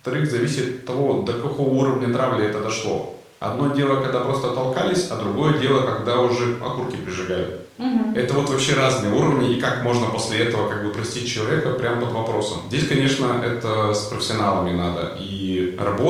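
No technical faults are audible anywhere in the recording.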